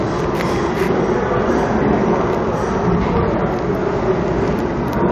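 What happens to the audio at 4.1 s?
Nothing goes wrong at 4.1 s; the audio carries on intact through that moment, with no dropout, click, glitch or other fault.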